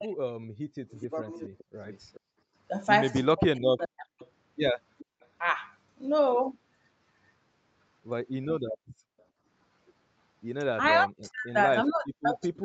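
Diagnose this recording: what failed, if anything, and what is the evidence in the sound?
Speech suppressed in double talk, at the call-processing stage: speech dips by up to about 40 dB across 0.0–4.23 s and 11.01–12.65 s, likely the echo canceller attenuating both overlapping talkers.

Echo leak, also call processing: a faint copy trails the speech by 426 ms, about 25 dB down across 0.9–5.27 s, and about 40 dB down at 9.19 s. The likely cause is residual loudspeaker echo escaping cancellation.

Background gated by the echo canceller: room sound drops about 39 dB within 2.2–5.2 s and about 36 dB across 8.73–9.46 s, as the canceller clamps the microphone during loudspeaker playback.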